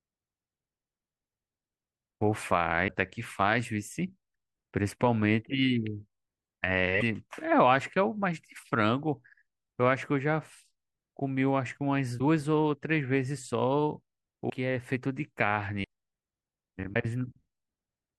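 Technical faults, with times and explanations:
2.87–2.89, 7.00–7.03, 12.18–12.21, 14.49–14.51, 15.83 and 16.93–16.96 s: broken MP3 bit reservoir. Brief garbled bursts roughly one 24 ms frame long, likely from lost frames leaving the next frame reading another frame's bytes. The audio jumps forward rather than pausing and resuming in place as a plain dropout would.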